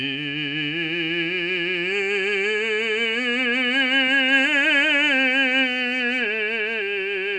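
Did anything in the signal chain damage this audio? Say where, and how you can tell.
Yes, at the codec stage, across the whole clip. The music has a rough, hissy halo and a smeared, watery texture, and the spectrum stops dead at about 10.6 kHz. That pattern likely comes from Nellymoser compression (Nellymoser Asao) at a low rate, which fits a stream of around 44 kbps. The codec spreads a fixed bit budget over short blocks, starving weaker bands and filling them with noise, so detail blurs and hiss rides along.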